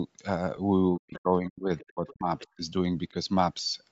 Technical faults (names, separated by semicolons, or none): lost LE Audio frames; speech suppressed in double talk; other side's voice leaking through